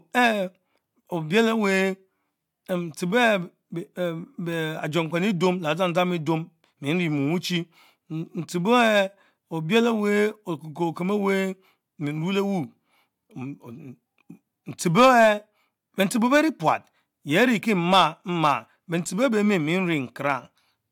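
A recording of speech, with no technical fault to be heard anywhere in the signal.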